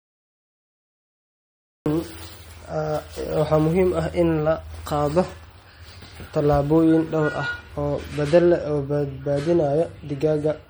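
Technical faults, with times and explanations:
0.00–1.86 s, cut-off start: the first 1.86 s are pure digital silence, and then the speech just snaps in at 1.86 s partway through a sound. There's no natural onset or fade-in, so you hear that abrupt hard edge, like somebody hit record a beat too late and caught the talker mid-syllable. That's the hallmark of a capture or stream that started late rather than a real pause before speaking.
Throughout, MP3 compression: the whole clip has that plainly audible watery, swirly quality, with sibilants turning metallic and chirpy, which is likely from MP3 encoding at a low rate, something that fits roughly 48 kbps. At that budget the encoder keeps zeroing quieter frequency bands, which then blink on and off frame to frame. That flicker is the swirl, and consonant attacks come out smeared.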